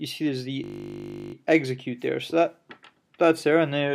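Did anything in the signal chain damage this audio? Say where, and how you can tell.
Yes, at the driver or buffer stage. From 0.64 to 1.34 s, a 20 ms slice repeats exactly, 35 times, giving a steady 50 Hz buzz. This is a system hang loop. The system froze while the hardware kept replaying one small ring buffer.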